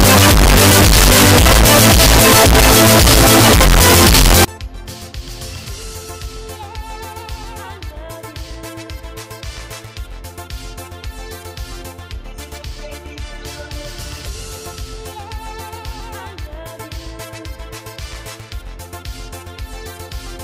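From 0 to 4.45 s, the samples, which fit a 16-bit format, were likely read with signed and unsigned mixed up. Flipping the top bit turns each zero crossing into a full-range leap, producing very loud, harsh distortion where quiet moments blare as loudly as everything else.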